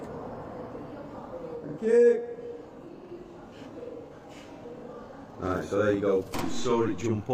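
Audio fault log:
1.57 to 7.34 s, channel delay (doubling): one side lags by about 46 ms, which fits a 2048-sample buffer, so summed to mono you get a same-level slapback doubling everything.
1.72 to 1.78 s and 4.06 to 4.12 s, AAC frame loss with concealment: each gap is about 43 ms, consistent with one lost frame, and the decoder patches it from the previous spectrum, leaving a brief smeared, phasey blip.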